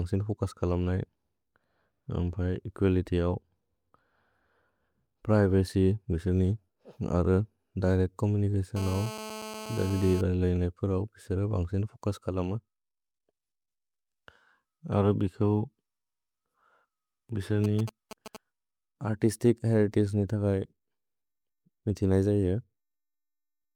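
From 8.76 to 10.21 s there's GSM phone buzz: a nearby phone mid-call has its radio bursts rectified by the audio circuit, giving a hard, raspy 217 Hz buzz about 13 dB under the speech. Then at 17.64 to 18.37 s come GSM signalling bursts, a galloping dit-dit-dit of short 217 Hz buzzes, slightly quieter still.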